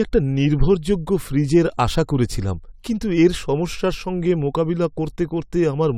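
No technical faults are audible.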